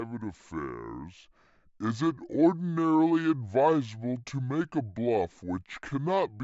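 From start to finish the speech sounds sluggish and deep, running at about two-thirds speed and seven semitones low. This is a wrong sample rate fault: unconverted samples play out slower than captured, which fits 48 kHz audio played at 32 kHz.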